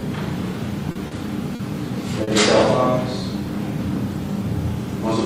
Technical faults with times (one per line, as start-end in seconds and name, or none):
0.91-1.14 short concealed packet loss
1.55-1.62 short concealed packet loss
2.23-2.30 short concealed packet loss